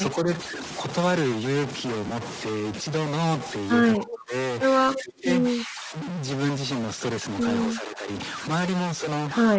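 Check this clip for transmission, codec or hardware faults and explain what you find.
Four kinds of fault are audible in this speech recording: two run through the whole clip and two occur at specific moments.

Stuck bit, throughout. A distortion sits on top of the voice for the full length, and the pauses are filled with a steady noise floor rather than going quiet. This is likely caused by one data bit held permanently at 0 or 1 in the converter or data path. Roughly half the samples are pushed off by that bit's weight. Near silence the bit keeps flipping against the sign of small values, which produces the hiss in the gaps.

Bluetooth LC3 compression, throughout. The voice has a breathy, grainy edge, and the upper spectrum sounds filled in with noise rather than carrying real detail. The damage is plainly audible. This is likely the LC3 codec of Bluetooth LE Audio running with 10 ms frames at a low rate, which fits a bitrate around 32 kbps. 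At that rate the encoder zeroes much of the high band and the decoder fills the gaps with noise.

Lost LE Audio frames, at 0.44 s and from 2.08 to 2.12 s. The first is a single 10 ms frame, and the second covers 30 ms, about three frames. In each spot the voice briefly turns into a noisy, smeared texture. When a frame is missing, the LC3 decoder repeats the last spectrum with randomised signs.

Speech suppressed in double talk, from 3.98 to 4.34 s, 4.93 to 5.27 s, 5.56 to 5.95 s and 7.68 to 8.08 s. The voice dips sharply in each window, by about 25 dB in the first two and about 10 dB in the last two. These dips likely come from an echo canceller that could not separate the near talker from loudspeaker echo while both sides spoke, so it attenuated everything. Each dip lasts a few hundred milliseconds.

The call microphone processing removes the lowest bass as intended. Nothing is present above 8 kHz, which fits a 16 kHz sample rate.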